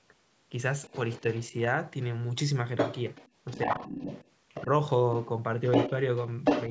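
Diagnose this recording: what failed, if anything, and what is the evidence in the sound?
The other side's voice leaking through appears at 0.84–1.45, 2.77–3.29, 3.47–4.30, 4.49–4.65, 5.21–5.26, 5.64–5.90 and 6.44–6.69 s. It ranges from barely audible to louder than the talker. In call processing, the echo canceller likely left loudspeaker pickup in the microphone signal. A spectrogram shows a second, unrelated set of harmonic traces over the talker's.

Speech suppressed in double talk occurs at 4.65–4.70 s, just as a leak ends. The talker's level dips by about 5 dB for roughly 50 ms. Unable to separate the near voice from the echo, the canceller likely turned both down. The waveform envelope shows a brief notch there.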